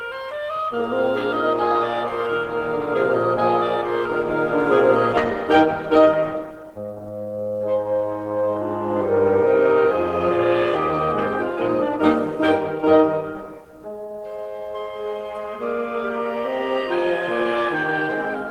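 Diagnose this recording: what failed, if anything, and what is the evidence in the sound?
At 5.17 to 5.19 s the music lurches forward with no gap, as if about a second of playing vanished and the two sides were butted together. This is a skip ahead, in the network or at the jitter buffer: a second of audio was discarded while later packets were already queued.

From 5.55 to 6.92 s the music runs hurried, about 112% speed with unchanged pitch, and the tempo stops being steady. This is a jitter buffer speed-up: the overfull buffer trimmed short pitch-period slices, shedding roughly 150 ms to reduce delay.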